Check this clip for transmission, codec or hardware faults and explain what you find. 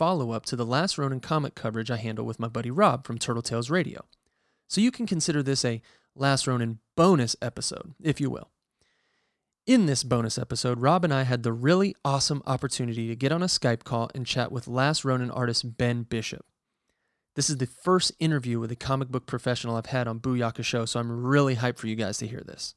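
No fault of any kind can be heard in this speech recording. There is nothing here that needs a timestamp or an explanation.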